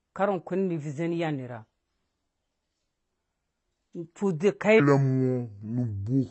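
AAC compression, throughout the clip: the speech is dull and smeared, with nothing above about 8.1 kHz and a plainly audible warbling, fizzy texture on sibilants and held sounds. This is likely the work of an AAC-LC encoder run at a low bitrate, something near 24 kbps, where the perceptual model can't afford the upper bands. It cuts them off and quantises what remains so coarsely that the spectrum develops holes that shift from frame to frame.

Section at the wrong speed, from 4.80 s to the end at 6.30 s: the final stretch plays at 0.64 times its proper rate, so the speech suddenly drops by roughly seven semitones and drags, sounding deep and sluggish. Speed and pitch fall together because the samples are simply read out more slowly. That is the signature of a section resampled or played against the wrong clock rather than deliberately pitch-shifted.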